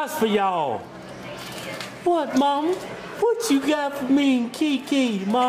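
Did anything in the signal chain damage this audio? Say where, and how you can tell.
No, nothing in the signal chain stood out as a problem on listening, and there's no point in the audio where any stage can be heard leaving a mark.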